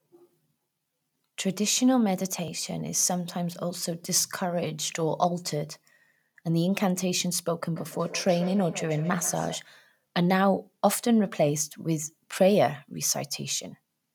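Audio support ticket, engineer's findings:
Feedback echo between two devices, 7.76–9.68 s. Second device in the same room is playing back the first unit's mic feed, and that mic recaptures it. Each canceller ignores the other's output. Speech repeats roughly every 150 ms, thinner and ringing, peaking about 14 dB below speech.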